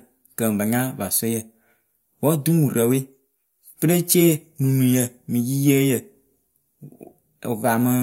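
No technical faults are audible anywhere in the speech.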